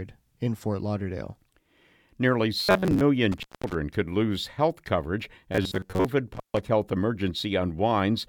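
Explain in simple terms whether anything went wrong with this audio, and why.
Twice the speech turns into a stiff, metallic buzz, at 2.60 to 3.05 s and 5.52 to 6.08 s (after "could lose health coverage"). This robotic sound from repeated short buffers likely comes from audio arriving too slowly, so a tiny slice of about 11 ms is replayed, forcing a steady 94 Hz hum.

There are also two brief dropouts with crackly edges, at 3.32 to 3.74 s (just before "could lose health coverage") and 6.34 to 6.60 s. The sound vanishes for about 0.2 s and 0.14 s. That is an intermittent contact, where a loose cable or plug momentarily breaks the signal.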